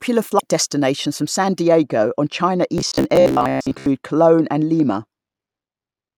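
Right at the start, from 0.35 to 0.41 s, just before "destinations from", there's a short squawky blip. That's damaged data in the compressed stream: the decoder hits corrupted frames, loses sync, and grabs the next good frame header.

From 1.6 s to the end, the top end is rolled off. The treble sits about 11 dB down at 10 kHz relative to 1 kHz, sloping smoothly, so everything sounds dull and muffled. That's de-emphasis applied wrongly, a treble cut on audio that never had pre-emphasis or a second cut on top of one already applied.

Between 2.78 and 3.86 s the speech turns into a rigid, metallic buzz pinned at 66.7 Hz that still loosely tracks the speech. That's the robotic sound from repeated short buffers, likely caused by late-arriving audio being covered by looping the last 15 ms or so, with roughly 70 percent of that stretch being repeats.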